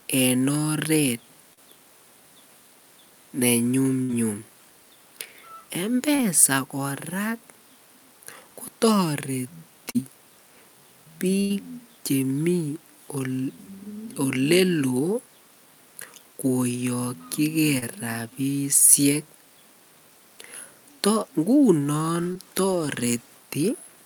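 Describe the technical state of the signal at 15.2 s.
At 15.2 s the speech signal is intact, with no audible technical fault at that moment.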